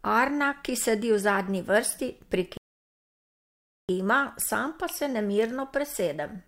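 At 2.57 s, after "sedi v zadnji vrsti", the speech cuts to silence until 3.89 s, a rebuffering stall: playback ran dry and waited for data. Unlike a dropout, it resumes exactly at "sam pa se" with nothing missing, just 1.3 s added.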